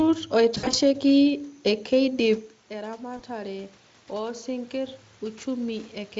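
From 0.57 to 0.75 s, VoIP packet loss concealed by the speech codec: about 100 ms lost in scattered gaps, the longest 60 ms. The decoder stretches the last sound into a fading buzzy tone or coloured noise. Weak, distorted output lingers briefly as packets resume.

From 2.07 to 5.98 s, automatic gain rising: the talker moves away around 2.5 s, dropping the level about 14 dB. The gain control gradually raises gain about 6 dB, so voice and room noise swell together.

From 3.17 to 3.23 s, a second concealed packet loss covers one 20 ms gap, a short stretched smear with brief weakness afterward.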